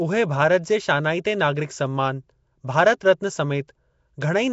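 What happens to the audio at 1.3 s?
At 1.3 s the speech carries Nellymoser compression, present throughout. It likely comes from coding blocks at a fixed two bits a sample, with empty bands filled by noise. This gives a rough, hissy, smeared sound, with nothing above 7.7 kHz.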